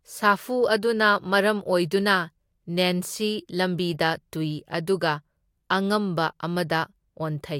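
At 3.93 s, just before "ꯇꯨꯢ ꯑꯗꯨꯒ", a corrupt frame was decoded. Flipped bits in what sounds like a single compressed frame were played anyway, so misread gains spread energy into the wrong frequencies. The result is a brief, quiet chirp, squeak or blip, peaking around -35 dBFS, over the speech.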